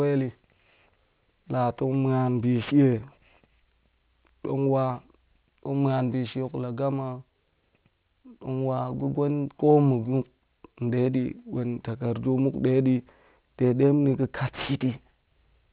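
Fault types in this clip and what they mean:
aliasing: Sibilants and other bright consonants come out gritty and metallic throughout the speech, with spurious tones that bear no relation to the voice, sitting roughly 25 dB below it, and the spectrum runs hard up to an edge at 4 kHz. The sample rate was cut without first filtering off everything above half the new rate, so high content folded back around 4 kHz. This points to a drop from 48 kHz to 8 kHz.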